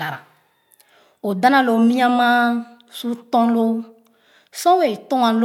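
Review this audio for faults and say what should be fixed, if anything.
Nothing stood out on listening to this speech, so there is nothing to fix.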